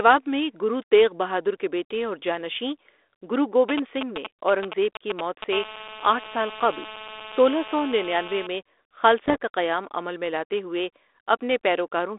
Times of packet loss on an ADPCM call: none

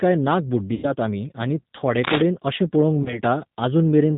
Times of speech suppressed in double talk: none

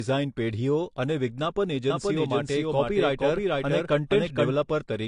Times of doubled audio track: 1.90-4.54

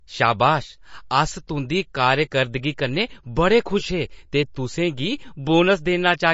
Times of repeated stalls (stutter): none

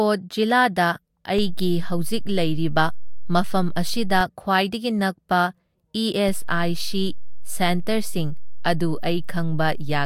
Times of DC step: 1.38-4.21, 6.29-10.05

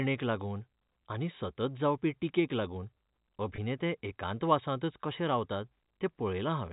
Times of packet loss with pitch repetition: 3.56-3.58

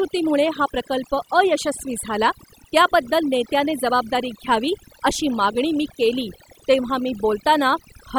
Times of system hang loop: none

